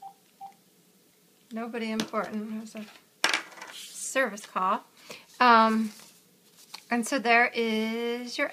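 Nothing to flag here, as the audio runs along without any technical trouble turning up anywhere.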